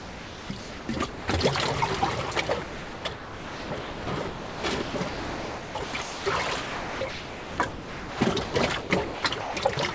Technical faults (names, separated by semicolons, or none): sound chopped by the voice detector